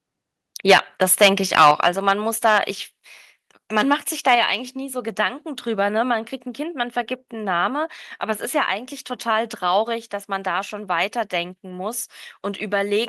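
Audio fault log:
0.71 s, microphone volume stepped down: The speech level drops suddenly by about 2 dB. Call software likely lowered the input volume in one step.
1.11–2.12 s, microphone overload: Peaks run about 9 dB past the converter's limit, and a few percent of samples are flattened. This gives loud syllables a harsh crackle. Input gain was likely set too high.
1.71 s, microphone volume stepped down: The speech and background fall abruptly by about 5 dB, mid-distortion. Software likely cut the input volume in response.
4.28–4.35 s, microphone overload: A brief burst of clipping, about 2 dB over the limit, with roughly 2 percent of samples cut. The peak sounds briefly rough. Input level was likely too hot.
4.35 s, microphone volume stepped down: Right after that distorted peak, the level drops about 4 dB in one step. Software likely reacted to the clipping.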